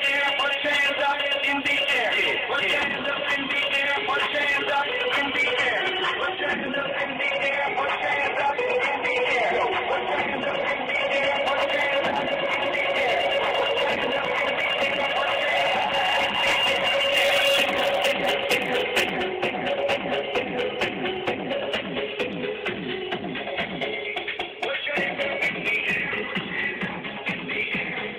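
Two separate problems show up in this audio. From 5.41 to 11.41 s you get an adaptive stream at a lower bitrate: the quality drops suddenly with no gap and everything above 9.7 kHz disappears. That points to the player switching from something like a 96 kbit/s AAC stream down to roughly 32 kbit/s because the connection slowed, then climbing back up after about six seconds. The second problem runs from 17.16 to 19.16 s, where pre-emphasis has been left on. The treble jumps up by about 14 dB at 10 kHz relative to 1 kHz, so that stretch sounds thin, glassy and hissy on sibilants. The shape fits a 75 µs FM emphasis curve whose matching de-emphasis was never applied on playback.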